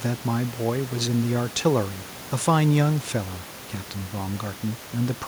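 Speech recording with no technical faults to report.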